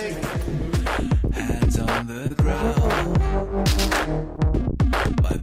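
Two brief smears interrupt the audio, one at 2.27 to 2.32 s and another at 4.36 to 4.39 s, each a momentary wobble where the sound blurs and then blends back. Both are short concealed packet loss: roughly 20 ms of audio never arrived in time, and the receiver covered each hole by extending the preceding sound, about 25 ms of fill in the first case and 14 ms in the second, before blending back into the real signal.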